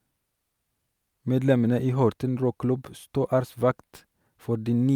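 Speech, with no audible technical faults anywhere in the clip.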